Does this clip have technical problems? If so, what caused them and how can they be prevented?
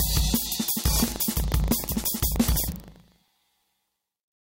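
Yes. Buffer tearing runs from 0.76 s to the end, heard as a steady 25 Hz rattle. The writer and reader of the ring buffer have slipped, so a small sliver of each period replays audio from roughly a tenth of a second earlier, with hard joins either side. To prevent it, keep writes ahead of the hardware read pointer with enough latency headroom.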